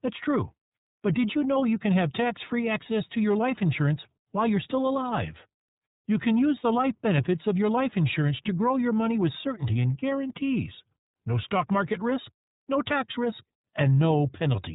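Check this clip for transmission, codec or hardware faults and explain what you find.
The whole clip has been through the iLBC codec, a narrowband VoIP coder. Its roughness is plainly audible from start to finish. iLBC codes each 30 ms frame's excitation independently of the previous one, and the coding leaves a slightly coarse, synthetic edge on the speech. Its grain fits the 13.33 kbps mode. On a spectrogram, energy stops sharply at 3.8 kHz with nothing above. The waveform shows no gaps.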